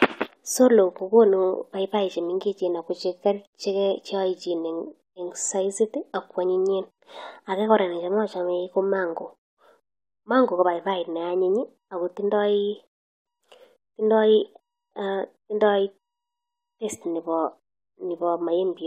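Nothing in the recording stood out as a technical problem on listening.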